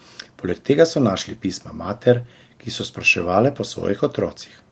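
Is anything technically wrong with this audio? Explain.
No, nothing here is actually wrong: the speech has simply come through a normal call chain, with the top end stopping around 8 kHz as you'd expect from a call microphone and a low-bitrate call codec.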